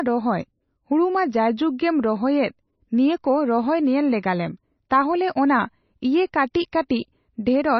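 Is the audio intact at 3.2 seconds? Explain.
No. Heavy MP3 compression, likely from a very low bitrate, runs throughout. The encoder removes everything above 5.9 kHz and drops weak frequency lines, leaving watery, swirly speech.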